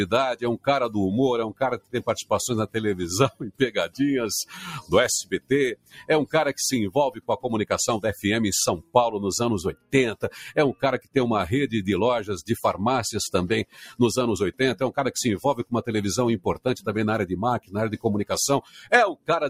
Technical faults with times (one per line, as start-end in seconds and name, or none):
0.00-19.50 noise suppressor applied to music or sounds
0.34-7.46 sound cut by the noise suppressor
8.78-11.16 sound cut by the noise suppressor
13.65-14.60 sound cut by the noise suppressor
15.60-19.29 sound cut by the noise suppressor